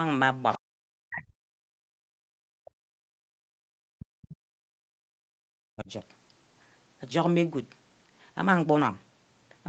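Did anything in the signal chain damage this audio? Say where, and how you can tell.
Yes. The damage is in the call processing stage, where the echo canceller is handling loudspeaker playback. From 0.53 to 0.58 s a faint second voice can be heard under the talker, about 25 dB below the speech. This is other side's voice leaking through. The canceller's model of the loudspeaker-to-microphone path likely didn't fully subtract the far end, so a brief residue of it reaches the outgoing signal.

The same stage also caused speech suppressed in double talk. The talker's voice dips hard, by roughly 40 dB at its deepest, from 0.58 to 0.65 s, 1.04 to 1.53 s, 2.25 to 3.2 s, 3.7 to 4.42 s and 5.12 to 5.9 s. The dips come in chunks instead of following the talker's own level. The likely cause is both sides speaking at once. The canceller's residual suppressor couldn't separate near speech from echo, so it attenuated everything.

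The third fault is background gated by the echo canceller, again in the call processing stage. The room tone drops out from 1.81 to 1.97 s and from 4.7 to 4.84 s, by about 31 and 33 dB, for roughly 150 ms each. It then returns. This is the canceller clamping the microphone while the loudspeaker plays and releasing it afterward.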